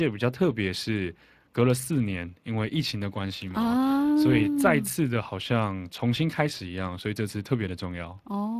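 Speech coded with the Speex codec runs through the whole recording, and the damage is plainly audible: the voice sounds hoarse and grainy, with a rough noisy texture in place of clean voicing. The roughness points to a setting around 22 kbps, where the CELP excitation is starved of bits. Unlike a low-bitrate MP3 or AAC file, there is no swirly, warbling treble or pre-echo smearing; the degradation sits inside the voicing itself.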